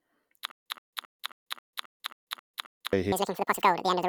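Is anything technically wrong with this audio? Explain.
Yes, there are two faults.

From 0.51 to 2.93 s there is a stutter with silent gaps. A burst of speech about 123 ms long plays, then about 145 ms of dead digital silence follows. The cycle repeats every 268 ms, nine times. The likely cause is a stalled player or stream that replayed its last fragment at each retry and then ran dry. The speech meant for that stretch never arrives.

From 3.12 s to the end, a section plays at the wrong speed. It runs at 1.95 times normal rate. Pitch rises with it, by around ten semitones. The voice sounds high, thin and rushed. The likely cause is playback or editing against the wrong clock, so the samples were read out nearly twice too fast.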